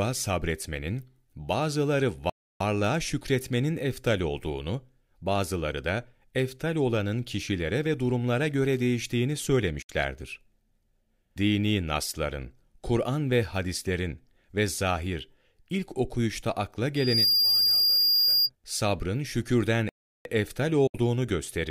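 A speech recording with three kinds of fault. At 2.30 s the sound stops dead for about 0.31 s, and again at 19.89 s for about 0.36 s, then resumes where it left off. This is a playback stall, likely the player's buffer running dry or its thread being blocked so that nothing reached the output. At 9.82 s and 20.87 s there are brief holes of about 80 ms, each with a fast 8 ms fade into silence. Roughly 64 ms of programme is missing each time. This is a digital broadcast dropout: the receiver muted over what sounds like two lost or corrupt frames. From 16.95 s to 18.50 s a 4.8 kHz tone swells within about a third of a second to around 5 dB above the speech. That is loudspeaker feedback squeal, a microphone re-amplifying its own loudspeaker until that frequency runs away.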